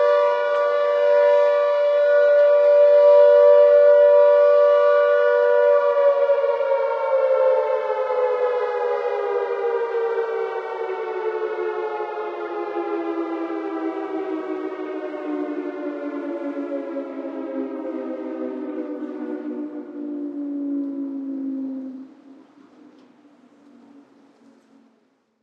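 No technical faults are audible anywhere in the recording.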